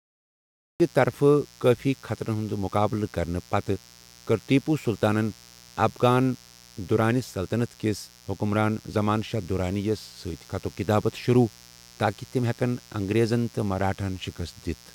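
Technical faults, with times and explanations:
Throughout, mains buzz: a steady, raspy 60 Hz buzz sits under the speech the whole way, a fair bit quieter than the speech. Something like a dimmer, a rectifier or a missing shield is letting sharp switching spikes into the signal, two per mains cycle, so you get a dense stack of 60 Hz harmonics reaching up into the kHz range. That's why it sounds rough rather than like a clean hum.
0.0 to 0.8 s, cut-off start: the file opens on flat digital silence, and then at 0.8 s the speech just appears partway through a sound, with no natural onset or fade-in. The recording or stream clearly began late, so whatever came before that point was never captured, and the first sound you hear is already underway when it arrives.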